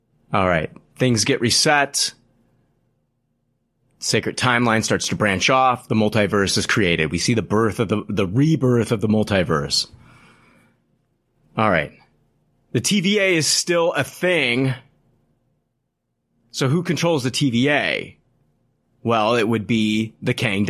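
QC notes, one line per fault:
No faults heard anywhere in this speech recording.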